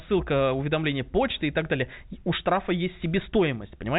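No technical faults are audible.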